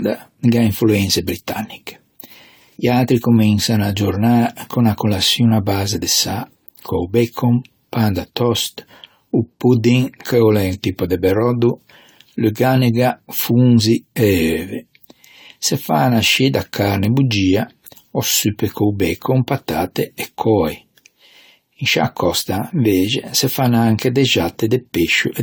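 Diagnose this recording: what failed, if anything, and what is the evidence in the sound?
Throughout the speech the sound is swirly and hollow, with a watery smear around consonants and blurred attacks, more degraded than a single encode at this quality would leave, even though content still reaches about 20.1 kHz. The stage is the codec: this is likely generation loss, the audio having been decoded and re-encoded around four times, which fits AAC-LC at 64 kbit/s. Each pass requantises on a shifted frame grid, so noise and spectral holes accumulate.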